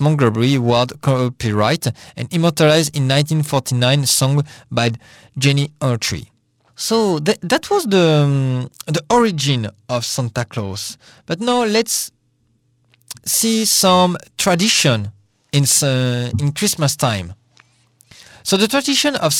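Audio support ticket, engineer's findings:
Periodic clock jitter, present across the whole speech clip. Rough, metallic edge on voiced sound, worst on brighter high-frequency content, gone in pauses. Probable component: converter sample clock picking up interference. Mechanism: timing wobble at around 1 kHz puts sidebands roughly 1 kHz above and below each speech component, stronger at higher frequencies. Check clock source isolation and nearby periodic noise sources.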